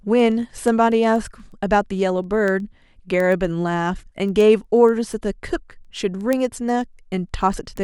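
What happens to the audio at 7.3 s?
At 7.3 s the receiving device is still running on its own clock, not locked to the sender's digital link, with the two clocks drifting apart by something on the order of 150 ppm. Each time they slip past each other, a sample is dropped or repeated. The result is word clock ticks: sharp clicks of uneven strength, about ten per second, running under the speech from 0.20 s to 7.77 s, about seventy in all.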